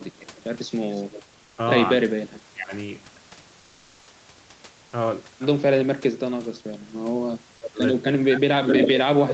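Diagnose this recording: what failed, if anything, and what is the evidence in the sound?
From 1.43 to 1.57 s the background becomes a steady, featureless hiss about 2 dB quieter. This is comfort noise in place of the background, likely from Opus discontinuous transmission.

The speech dips sharply at 1.99–2.73 s, 6.05–6.56 s, 7.59–7.80 s and from 8.1 s to the end, by as much as roughly 35 dB. This is speech suppressed in double talk, likely by the echo canceller.

From 8.68 to 8.88 s a delayed copy of the speech, about 335 ms late and roughly as loud as the original, is an echo leak, likely from the echo canceller missing loudspeaker pickup.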